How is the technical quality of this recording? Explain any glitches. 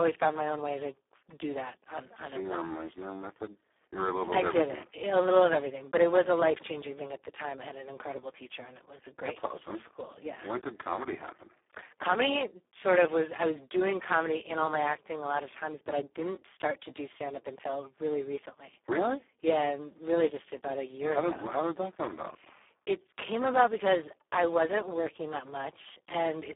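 The quality is poor throughout, because the speech has been squeezed through the Speex codec at a very low setting. It sounds like a bitrate of about 4 kbps. With so few bits for the excitation, the codec approximates each segment crudely, leaving the voice noisy, hoarse and edging toward robotic. The damage is heavy. The band is confined to a telephone-like 300 Hz to 3.5 kHz, with nothing above 3.8 kHz.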